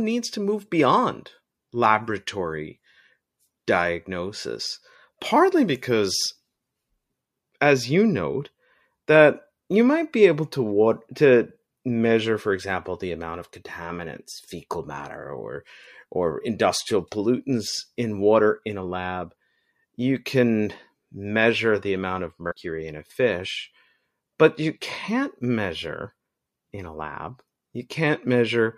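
At 22.50 s, after "measure the amount of", compressed frames are skipped. Roughly a tenth of a second vanishes, about five frames. Sound jumps to "in a fish".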